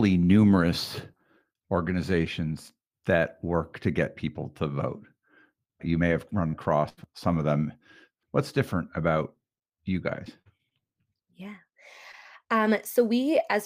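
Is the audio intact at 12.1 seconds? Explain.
No. From 12.11 to 12.15 s there is a short concealed packet loss. About 20 ms of the speech never reached the decoder in time, and the receiver papered over the hole by extending the preceding sound, pitch-continued if voiced or as shaped noise if not, for roughly 16 ms before crossfading back into real audio. The result is a brief smear or wobble at that point.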